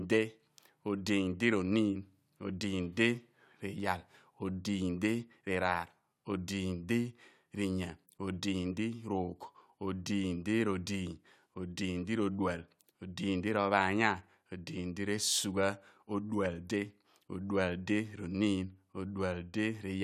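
No technical faults can be heard anywhere in this speech recording.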